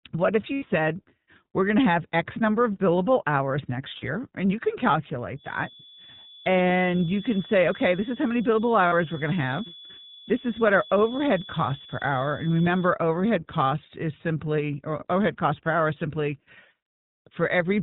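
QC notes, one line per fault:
Throughout: iLBC codec, plainly audible; speech is band-limited below 4 kHz and sounds rough and synthetic, coded in 20 ms frames at a rate fitting 15.2 kbps.
0.54–0.64 s, 3.98–4.05 s, 8.88–8.94 s: lost iLBC frames; brief held, buzzy vowel-like fill where the decoder repeats the last pitch cycle with noise, with recovery at once.
5.33–12.96 s: feedback whistle; thin steady tone near 3.4 kHz, about 20 dB under the speech and swelling and fading slowly, likely a loudspeaker-to-microphone loop sitting just below runaway.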